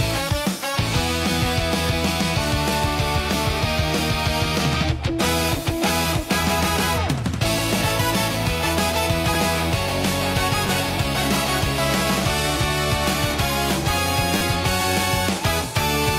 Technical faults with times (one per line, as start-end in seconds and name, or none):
7.79-7.83 damaged data in a compressed stream
9.34 repeated buffer
10.67 repeated buffer
12.52-12.55 damaged data in a compressed stream
14.37-14.41 repeated buffer